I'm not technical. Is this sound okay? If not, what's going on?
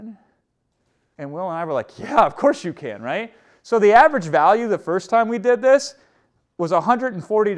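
Yes, no faults are audible.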